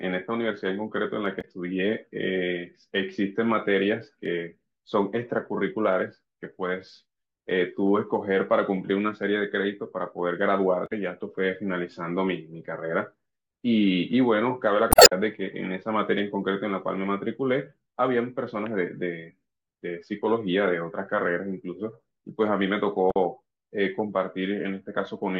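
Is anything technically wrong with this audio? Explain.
Yes. Short glitches break into the speech at 1.38–1.45 s, 10.84–10.92 s, 14.89–15.12 s and 23.08–23.16 s. This is damaged data in a compressed stream: the decoder misreads corrupted frames, loses sync and hunts for the next header.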